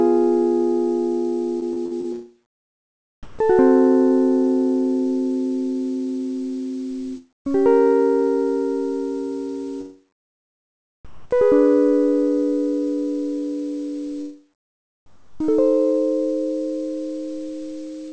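From 1.60 to 2.07 s the music turns choppy. That's repeated packet loss: four short holes, the longest about 49 ms, each patched by stretching the last bit of sound. Around 120 ms of real audio is missing, and the patching covers roughly a quarter of that half-second, so you hear a stuttering texture rather than clean gaps.

Then there are three spots where the quiet background goes flat and featureless: 3.23 to 3.39 s, 11.05 to 11.31 s, and 15.06 to 15.40 s. This is comfort noise in place of the background, likely because the sender stopped transmitting during the quiet passages and the receiver filled in synthetic noise. The background there sits about 28 to 32 dB below the loud parts. The first two patches barely shift in level, about 1 dB up and then down. The last one drops about 7 dB.

At 7.17 to 7.47 s there's a long network dropout, likely from audio simply not arriving. The last sound smears into a fading buzz or hiss and then goes close to silent for about 0.22 s. 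When the music resumes, roughly 280 ms of it has been skipped. The whole clip lives under an 8 kHz ceiling, which fits a G.722 call path at 64 kbps.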